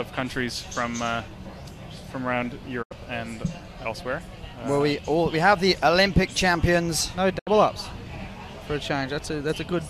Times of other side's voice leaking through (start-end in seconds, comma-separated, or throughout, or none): none